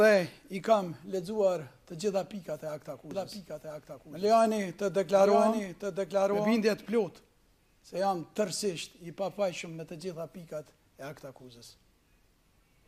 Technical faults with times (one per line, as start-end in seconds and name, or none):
3.11-6.63 doubled audio track